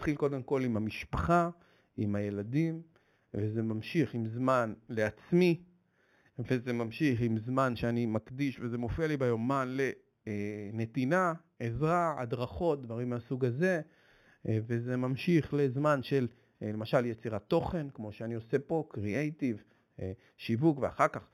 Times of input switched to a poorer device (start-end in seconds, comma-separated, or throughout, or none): none